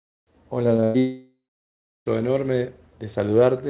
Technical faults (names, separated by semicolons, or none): short concealed packet loss; burst of packet loss; long network dropout